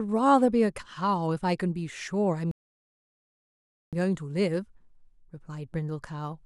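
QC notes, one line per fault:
2.51 to 3.93 s, rebuffering stall: the speech drops to dead silence for about 1.41 s, then picks up exactly where it broke off. The player exhausted its downloaded audio and paused until more arrived, so nothing is skipped, but the clip runs longer.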